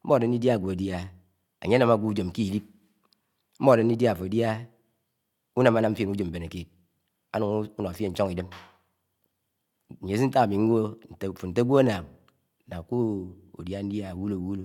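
Nothing in this recording stood out as a technical fault on listening.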